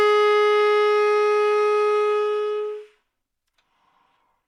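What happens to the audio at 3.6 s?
Nothing goes wrong at 3.6 s; the sound carries on intact through that moment, with no dropout, click or other fault.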